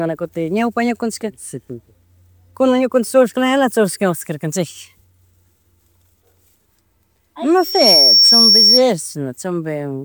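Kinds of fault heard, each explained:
Loudspeaker feedback squeal: the microphone re-captures its own loudspeaker, and at 5.5 kHz the loop gain passes one, so that tone swells over about a third of a second, 7.57 to 8.83 s, to roughly 10 dB above the speech; a fixed whistle never builds itself up.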